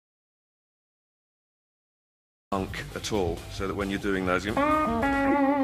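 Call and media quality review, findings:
Audio dropout to silence, 0.00 to 2.52 s, already under way at clip start. Input path lost, likely a disconnected capture device or mute upstream, while the encoder kept writing silence. Silence, no room tone; audio enters abruptly at 2.52 s.

Corrupt frame decoded, 3.73 s. Single damaged compressed frame played by the decoder; misread gains and codes put energy at wrong frequencies. Brief glitch, peak around -35 dBFS.

Corrupt frame decoded, 5.24 to 5.36 s. Run of roughly five bad frames, same decoder-side mechanism. Louder glitch, peak around -15 dBFS.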